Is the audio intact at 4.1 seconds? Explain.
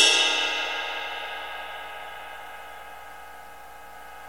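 Yes, the audio is intact at 4.1 seconds, with no fault present at that moment.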